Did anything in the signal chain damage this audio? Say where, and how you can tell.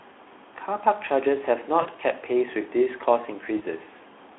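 Yes. VoIP packet loss concealed by the speech codec, at the network stage, at 1.82 to 1.89 s and 3.57 to 3.61 s: the decoder bridges gaps of 40 ms and 20 ms by extrapolating its last pitch and filter, so the speech stretches and fades before recovering. The surrounding Speex coding keeps the 300 Hz to 3.5 kHz line band.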